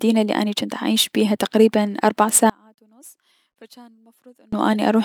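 From 2.50 to 4.53 s the speech drops by about 33 dB. Centred voice and low end almost disappear. The likely cause is one channel inverted. Summed to mono, the matching signal in both channels cancels. Only their faint difference remains.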